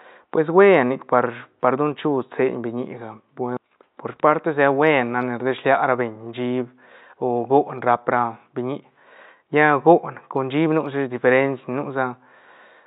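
No technical faults are audible.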